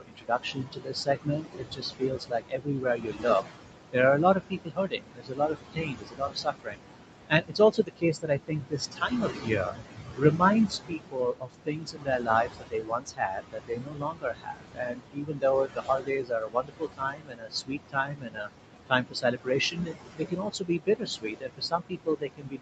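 From start to finish, noise suppressor artifacts are present. The room noise sits only about 6 dB under the speech, and the suppressor pulls it down by about 21 dB in the gaps, then lets it swell back beneath each phrase. Unlike steady codec coding noise, this pumps in step with the speech, sinking in pauses and returning under speech.

Speech cut by the noise suppressor happens repeatedly. The spans are 0 to 3.27 s, 4.17 to 6.79 s, 7.28 to 9.76 s, 10.16 to 10.42 s, 10.88 to 15.44 s, 15.65 to 18.5 s, and 18.87 s to the end. Within these, the suppressor mistook parts of the speech for noise and lowered them by up to about 22 dB, for roughly two seconds in most spans, about four seconds in the longest, and a fraction of a second at 10.16 s. Soft consonants and word endings sound swallowed or faint. This differs from a dropout or a gate: the speech is thinned and sunk along with the background, not chopped to silence, and never cleanly muted.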